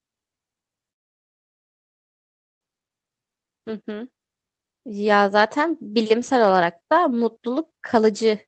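Speech carried over a call path whose sound tops out around 8 kHz, consistent with an Opus wideband link, shows a call audio freeze from 0.91 s to 2.64 s. After a brief tail, the audio drops to silence for about 1.7 s, then resumes exactly where it stopped. Nothing is lost, but everything after it arrives 1.7 s late. Delayed packets likely left the jitter buffer empty.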